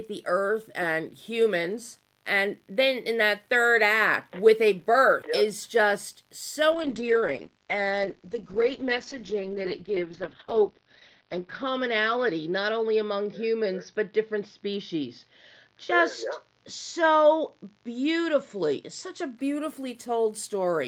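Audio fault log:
6.72–19.43 s, call bitrate drop: the audio loses everything above 6 kHz and turns rough, watery or muffled. This points to the call's bandwidth estimate falling and the encoder being told to spend far fewer bits, from a rate that fits about 40 kbps down to one near 8 kbps. At that rate the codec codes more coarsely and drops the upper band. The lowest stretch lasts about 4.4 s, and the sound clears before the clip ends.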